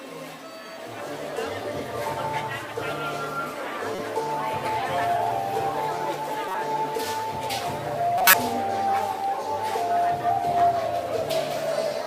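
At 3.95–4.00 s, 6.48–6.55 s and 8.18–8.34 s, a corrupt frame decoded: damaged compressed frames were played anyway, misplacing energy in frequency. The first two span a couple of frames each. The last covers roughly five frames and is the loudest error, near -10 dBFS.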